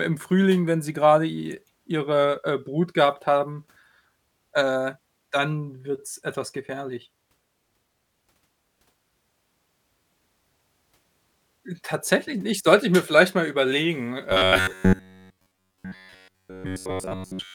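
Playback likely ran short of new audio from 14.30 s, after "mir vielleicht mal überlegen", and kept repeating roughly 11 ms buffers. This produces robotic sound from repeated short buffers, a rigid 93.8 Hz metallic buzz that lasts to the end.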